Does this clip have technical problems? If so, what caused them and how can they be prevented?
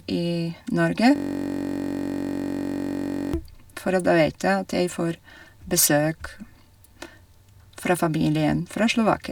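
Yes. From 1.16 s to 3.34 s the speech gives way to a steady, buzzy drone near 47 Hz. This is a system hang loop. The computer or audio driver stalled, and the sound hardware kept replaying the last chunk in its ring buffer, a 21.33 ms slice repeated about a hundred times. That length fits a 1024-sample buffer, and the rapid repetition fuses into a tone. To prevent it, give the audio thread real-time priority and keep drivers stable and up to date.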